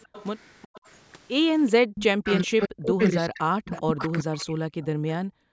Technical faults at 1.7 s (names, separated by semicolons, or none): echo leak; speech suppressed in double talk